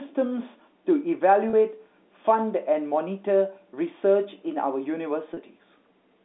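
At 1.50 to 1.53 s and again at 5.34 to 5.37 s there's packet loss with pitch repetition. About 30 ms goes missing each time, which fits a single lost packet. The receiver loops the last pitch period to cover the gap, so you hear a brief held, buzzy note under the band-limited telephone sound.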